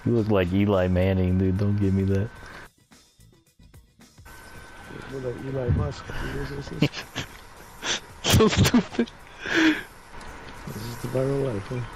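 No technical faults can be heard anywhere in the recording.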